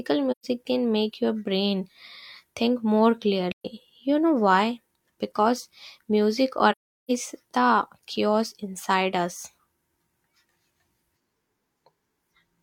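Speech with three soft-edged dropouts: at 0.31–0.46 s just before "can make your brain", at 3.52–3.66 s after "think more", and a longer one at 6.71–7.11 s before "the chaos inside us". This is AAC frame loss with muting, where lost frames are zeroed and the overlapping windows fade the sound out and back in. The short holes fit about 128 ms of missing data, and the long one about 384 ms.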